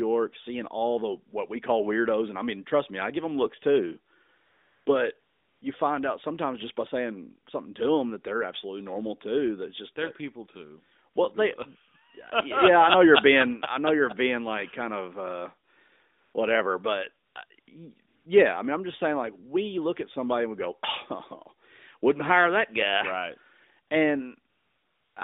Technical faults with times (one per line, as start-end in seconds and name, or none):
4.46-4.86 AMR comfort noise
5.20-5.62 AMR comfort noise
11.14 AMR comfort noise
16.24-16.34 AMR comfort noise
17.26-17.68 AMR comfort noise
18.08-18.26 AMR comfort noise
23.88 AMR comfort noise
24.50-25.16 AMR comfort noise